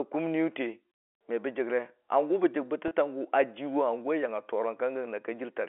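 At 2.88 s, lasting about 30 ms to 2.91 s, the speech shows packet loss with pitch repetition. Audio went missing, which fits three 10 ms packets, and the receiver filled the hole by looping the last pitch period, so the sound briefly holds as a slightly buzzy, frozen note. On a waveform this appears as identical repeated cycles. On a spectrogram the harmonics run flat and unchanging within the telephone band of 300 to 3400 Hz.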